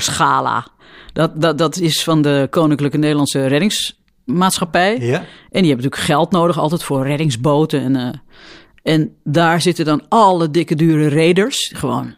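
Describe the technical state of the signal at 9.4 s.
At 9.4 s the speech signal is intact, with no audible fault at that moment.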